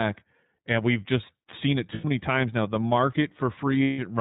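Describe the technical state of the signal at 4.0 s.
Lost iLBC frames run from 3.84 to 4.00 s, ending right at the moment asked. For about 150 ms the decoder had no packets, which fits five missing 30 ms frames. It covered the gap by repeating the last pitch cycle blended with noise, so the sound turns into a held, slightly buzzy, breathy vowel before clean decoding resumes almost at once.

Under this, the iLBC codec is audible throughout. It is narrowband, so nothing above 4 kHz survives, and the plainly audible, slightly rough, synthetic edge on the speech fits its 13.33 kbps, 30 ms-frame mode.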